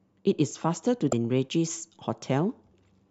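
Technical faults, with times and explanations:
1.12 s, damaged data in a compressed stream: a brief glitch as corrupted frames confuse the decoder until it resyncs on the next header.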